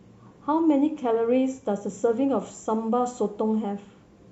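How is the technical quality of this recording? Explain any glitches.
Listening through the recording, nothing stood out as a technical problem, so there are no glitches to explain.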